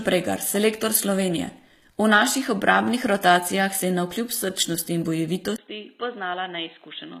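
From the start, the treble is present up to 15 kHz but sounds gritty and metallic, with lispy s sounds whose upper harmonics don't match the body below. This is likely HE-AAC compression rebuilding the top band by replication, at a rate fitting about 20 kbps, rather than plain lowpass dulling.

At 5.56 s, just after "srčnosti in", a 20 ms gap precedes a sudden change: nothing above 4.1 kHz, about 10 dB quieter, a new faint noise floor roughly 45 dB down. The input likely switched to a poorer device; a filter alone wouldn't alter level and noise together.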